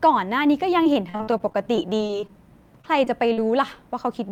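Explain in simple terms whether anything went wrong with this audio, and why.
Repeated packet loss (robotic sound) hits the speech from 0.83 to 2.38 s and again from 2.82 to 3.39 s. Chunks of audio never arrived in time, and each short hole, the longest about 40 ms, was patched by stretching the previous sound, giving a choppy sound with pieces missing.

A jitter buffer slow-down runs from 2.97 to 3.78 s. The receiver was short of stored audio or had just raised its target delay, so it repeated tiny slices to rebuild its reserve, adding about 52 ms. The speech plays at 94% speed there, slightly drawn out at the same pitch.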